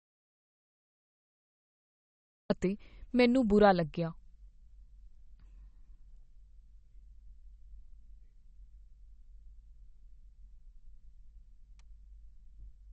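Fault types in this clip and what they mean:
MP3 compression: Nothing is heard above 8.4 kHz, so the top of the speech spectrum is missing. Codec damage is plainly audible throughout. It has the watery, swirling quality of weak frequency lines dropping in and out between frames, with smeared attacks. The likely cause is lossy MP3 encoding at a low bitrate. The sound fits roughly 32 kbps, where the encoder runs short of bits and discards detail it judges least important.
audio dropout to silence: The clip opens in dead silence, already under way, with no room tone at all. The sound returns at 2.5 s, just before "ਅਤੇ ਮੈਨੂੰ ਬੁਰਾ ਲੱਗਿਆ". The likely cause is a loss of input while recording continued. A disconnected device, a failed link or a mute could each do this. Whatever was said before 2.5 s is gone and cannot be recovered.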